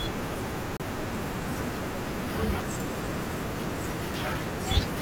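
A speech recording with two kinds of fault. From 0.77 s to 0.80 s, the sound cuts to 30 ms of silence. It then resumes. This is likely a Bluetooth stall. Radio interference would have delayed packets, so the headphones' buffer emptied. Playback then waited for the resent data before continuing. Separately, single sharp clicks occur at 1.15 s, 2.51 s, 3.33 s and 4.42 s. Each is a brief, thin tick rather than a gap. No sound goes missing. These are likely dropped samples, under a millisecond each. The waveform skips a tiny stretch and jumps abruptly to a later value. That discontinuity produces the click, seen as a narrow vertical line across the spectrum.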